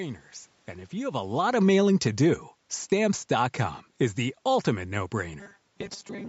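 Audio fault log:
0.94–3.51 s, automatic gain falling: the speech starts full and then sinks steadily by about 8 dB over roughly two and a half seconds, with the room noise dropping right along with it. That shared descent is what gives it away: the gain control judged the input too loud or its background noise too strong and eased its gain down, so everything in the signal path fell together. The talker's shift around 1 s changes only the voice, not the background.
2.90 s, lost LE Audio frames: a brief grainy smear replaces the speech for about 20 ms, a hiss-like blur where the tone should be, which fits two consecutive 10 ms LC3 frames going missing over the Bluetooth LE link. The decoder filled the gap by reusing the last spectrum with randomised phase signs, so the texture of the sound survives but its pitch and clarity dissolve into noise for that instant.
5.40–6.28 s, robotic sound from repeated short buffers: to the end of the clip the speech turns into a rigid metallic buzz locked at 200 Hz, still loosely tracking the syllables. 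A 200 Hz buzz matches a 5 ms stretch of audio being replayed over and over, with most of the real signal skipped. Fresh audio was likely arriving too seldom, so the playback side kept looping its last short buffer. The talker's movement near 5.5 s changes the level but not the buzz.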